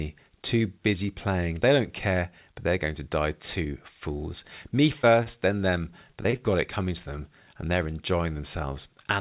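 At 5.02 to 5.05 s, just before "then them", there is a short concealed packet loss. About 20 ms of audio never arrived in time, and the receiver patched it by extending the preceding sound before blending back. It is heard as a brief smear. On a spectrogram, the preceding sound runs on unnaturally smooth for a few frames.

From 5.23 to 5.39 s, still ahead of "then them", there is a short stall from a late packet. The jitter buffer ran dry, so the last sound was stretched by about 26 ms until the packet turned up, with nothing lost. It sounds slightly held. The waveform shows a repeated, periodic stretch.

Between 6.11 and 6.40 s, after "then them" and before "got it coming to", there is repeated packet loss that gives a robotic sound. Four separate gaps, the longest 22 ms, were each filled by continuing the previous sound, so about a quarter of that span is synthetic. It sounds choppy, with pieces missing. 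A spectrogram shows striped, frozen patches. Throughout, the call path leaves nothing above 4 kHz, which fits a narrowband codec such as G.711 A-law.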